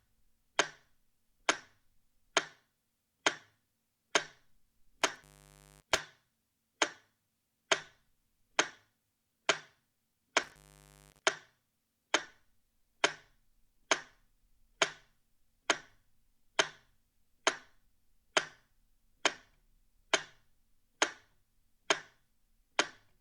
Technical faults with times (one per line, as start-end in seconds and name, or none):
5.02-5.99 intermittent contact
10.43-11.22 intermittent contact